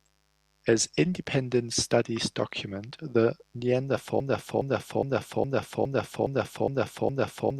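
Mains buzz runs from the first moment to the last, a steady, raspy layer sitting well below the speech. It is built on 50 Hz, but the rasp comes from harmonics stacked far above that base, up into the kilohertz range, because sharp switching spikes from something like a dimmer, a rectifier or an unshielded lead entered the signal twice in every mains cycle. That spiky waveform, rather than a pure hum, gives the buzz its edge.

A broken-record loop takes over at 4.20 s and carries on to the end. A fragment 0.41 s long plays back to back eight times, each pass identical, with no fresh speech breaking through. The likely cause is a player, encoder or stream that stalled and kept resending the last piece it held. Whatever should have been heard after 4.20 s never arrives, replaced entirely by the stuck repetition.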